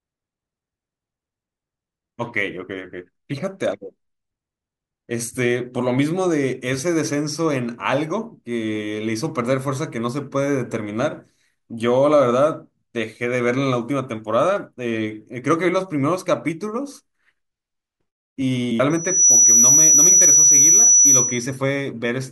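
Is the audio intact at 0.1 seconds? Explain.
Yes, the speech at 0.1 seconds plays through cleanly, with no dropout, click, distortion or other fault at that point.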